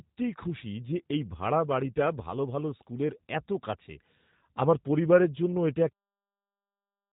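G.729 codec damage runs throughout: the speech is rebuilt from a coarse vocal-tract model and sparse pulses, which fits an 8 kbit/s link, so it sounds rough and synthetic, with nothing above 4 kHz, even through the smooth fade-out near the end.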